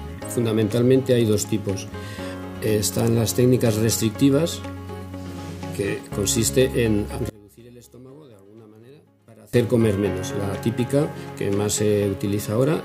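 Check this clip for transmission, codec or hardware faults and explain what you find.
One fault turns up, from 7.30 to 9.53 s: the sound collapses in level by about 26 dB, which points to one channel inverted, likely a polarity flip on one side of the stereo pair before a mono fold-down. With one side upside down, everything common to both channels cancels when they are summed, so the centred content and low end drop away, leaving only a faint residue of whatever differed between left and right until full level returns at 9.53 s.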